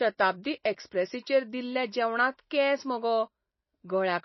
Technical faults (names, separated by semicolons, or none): MP3 compression